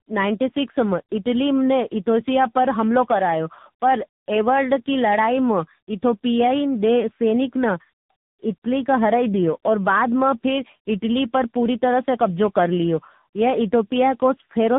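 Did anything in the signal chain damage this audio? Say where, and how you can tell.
Yes. Tandem speech coding damages the whole clip, from start to finish, at the codec stage. The speech is rough, muffled and warbly, and nothing reaches above 3.8 kHz. That combination points to a call passed through several speech coders in a row, with the last fitting a low-rate narrowband coder such as AMR-NB around 8 kbit/s. Each border decodes and re-encodes the signal, so every coder builds its errors on top of the previous one's.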